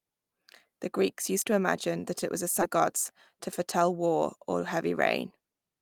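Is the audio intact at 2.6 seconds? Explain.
No, there's a skip ahead at 2.61 to 2.63 s. About 0.4 s of speech got dropped, probably because the jitter buffer overflowed with later audio already queued. So playback jumps straight forward, and the two sides butt together with no gap, leaving an abrupt missing chunk.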